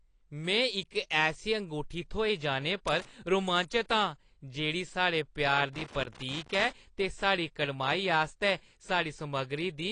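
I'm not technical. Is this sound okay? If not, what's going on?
No. The recording was likely squeezed by AAC compression, which throws away detail to save space. Nothing above about 10.2 kHz survives, so the speech sounds dull and smeared throughout, with a clear warbling, fizzy edge on hissy sounds.

There is also loose connector crackle: a worn or dirty contact in the cable or plug kept breaking and remaking the connection. That chops the signal into scratchy bursts, from 2.88 to 3.27 s, right after "ऐसी अंगूठी थ्होई जाने", and from 5.73 to 6.71 s, just before "ते साढ़ी कड़माई आस्तै".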